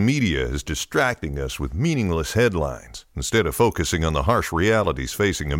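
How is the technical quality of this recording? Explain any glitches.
The speech signal stays continuous and undisturbed, with no technical faults to be heard anywhere in the recording.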